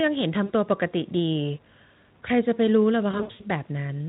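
VoIP packet loss concealed by the speech codec, at 0.46 to 0.53 s and again at 3.11 to 3.41 s: the decoder extrapolates its last pitch and filter with falling gain. The first brief dropout of about 40 ms is stretched into a buzzy tone or coloured noise. The second, about 200 ms of gaps scattered over roughly 280 ms with runs up to 80 ms, stays weak and smeared. Speex coding is lightly audible throughout.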